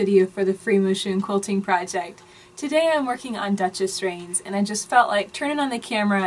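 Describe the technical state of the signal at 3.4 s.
At 3.4 s the signal is intact, with no audible technical fault at that point.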